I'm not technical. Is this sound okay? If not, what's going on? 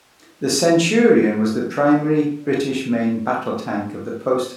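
Yes, this sound is okay; nothing is going wrong with it.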